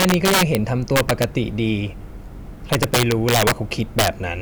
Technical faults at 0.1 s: integer overflow

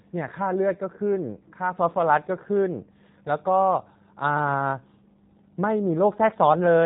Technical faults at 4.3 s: G.729 codec

